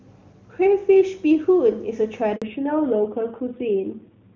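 At 2.36 s a handover gap cuts the speech to clean silence for 60 ms, until 2.42 s, as the call switches networks. It is a true dropout, not the smeared repeat of concealed packet loss.

From 2.42 s to the end, a fallback to narrowband removes everything above 4 kHz and the speech turns duller and rougher, which fits a drop from HD Voice to a narrowband codec around 7.4 kbit/s. The added coarseness sets it apart from a simple low-pass filter.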